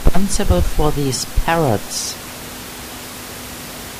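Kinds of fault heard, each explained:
No technical faults can be heard in this speech recording.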